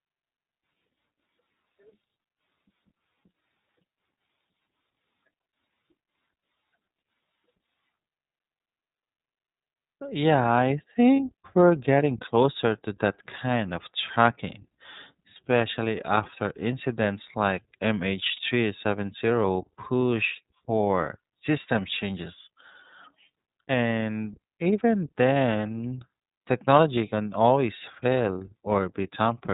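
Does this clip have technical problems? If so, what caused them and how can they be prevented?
Yes. The whole recording goes through the iLBC codec. The speech is band-limited to 4 kHz, so it's muffled, and it sounds plainly rough and a bit synthetic, which fits iLBC's 13.33 kbps mode with 30 ms frames coding each frame's excitation on its own. A wideband codec such as Opus would avoid this.

There are also lost iLBC frames at about 11.16 s, just before "we're getting closer to", and at 18.36 s. Each is a gap of about 30 ms, consistent with a single dropped frame. The decoder fills it by repeating the last pitch cycle mixed with noise, so you hear a brief buzzy, held sound before the speech snaps back. A steadier network path with a jitter buffer, or forward error correction, would prevent these dropouts.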